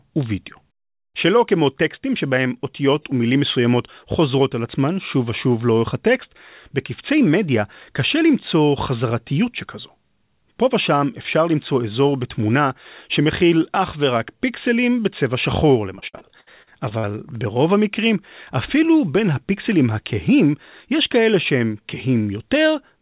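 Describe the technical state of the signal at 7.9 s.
At 7.9 s the speech is intact, with no fault present, and the only trait is the narrowband call-codec character of the whole call path, with nothing above 4 kHz, which fits G.711 A-law coding.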